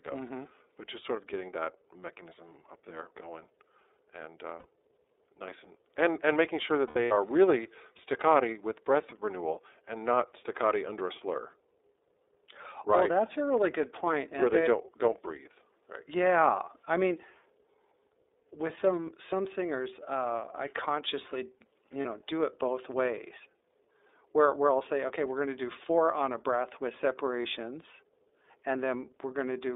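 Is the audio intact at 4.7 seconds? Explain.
No. At 4.7 seconds the sound sits right at the edge of a dropout and inside a constant layer of codec damage.

The lost iLBC frames run from about 4.58 to 4.66 s, a gap of 60 ms. That length points to two lost 30 ms frames. The decoder filled the hole by repeating the last pitch cycle with added noise. It sounds like a brief held, buzzy vowel. Because each iLBC frame is decoded on its own, the speech snaps back almost immediately after 4.66 s.

The iLBC codec also shapes the whole clip. The band is limited to roughly 300 Hz to 3.7 kHz, so the speech sounds thin and telephone-like. The 30 ms frames and the bitrate point to iLBC's 13.33 kbps mode. The codec rebuilds each frame's excitation independently, and that leaves the speech plainly rough and slightly synthetic.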